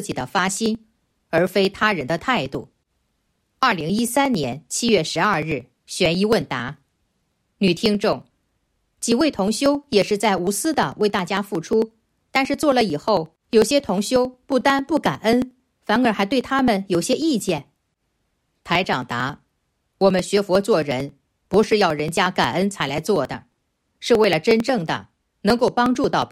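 From 0.12 s to 26.22 s the audio carries periodic USB or driver dropouts, repeating every 0.09 s, around three hundred in all. At each interval something stalls the USB bus or audio driver, and roughly 10 ms of signal is skipped outright rather than padded with silence, so the material on either side butts together. The result is a steady train of ticks at about 11 per second, audible only where sound is present.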